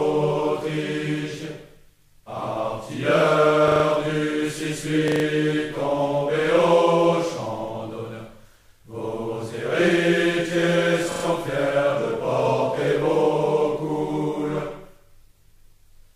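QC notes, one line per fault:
3.68–3.84 s, 5.08–5.24 s, 11.12–11.24 s: repeated buffer. Audio arrived late, so the output replayed its last block, a stutter of about 40 ms segments (fitting a 40 ms buffer) heard four, four, then three extra times, with hard joins. Nothing appears lost afterward.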